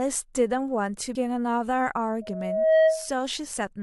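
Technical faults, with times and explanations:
1.14 s, compressed frames skipped: the speech jumps ahead about 150 ms, fitting a handful of dropped 23.2 ms frames.
2.21 to 3.11 s, loudspeaker feedback squeal: a 638 Hz tone swells over roughly half a second to about 10 dB above the speech, as the mic-to-speaker loop runs away at that frequency.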